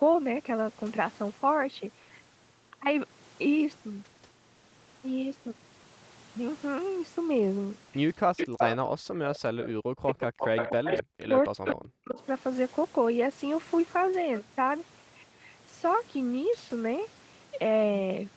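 Speech clip. Between 8.25 and 10.17 s, and again from 10.69 to 12.2 s, the voice dips by up to about 40 dB. This is likely speech suppressed in double talk by the echo canceller. A delayed copy of the voice also returns, about 262 ms late, at 8.37–8.73, 9.34–9.63, 10.2–11.03, 11.64–11.87 and 12.18–12.24 s. It sits roughly 5 to 30 dB below the speech. This is likely echo leak.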